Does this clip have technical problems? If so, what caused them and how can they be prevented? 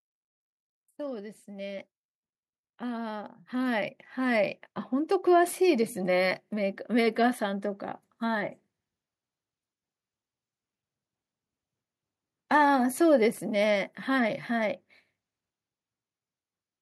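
Yes, automatic gain rising shows up twice in this speech: from 0.96 to 1.93 s the level creeps up by about 4 dB, then from 2.79 to 4.67 s by about 6 dB, voice and background swelling together. Fix the input gain manually or disable AGC before recording.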